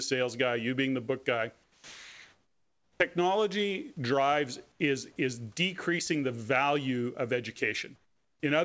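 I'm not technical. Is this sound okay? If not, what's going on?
No. The call system likely stopped sending sound during pauses. So at 1.64 to 3.00 s, 4.72 to 4.80 s and 7.96 to 8.40 s, the real room background is swapped for comfort noise in place of the background: a steady, featureless, slightly quieter hiss. The voice detector was also likely slow to notice speech starting again at 2.96 s. The first 40 ms never arrived, so the speech begins abruptly there, an onset clipped by the voice detector.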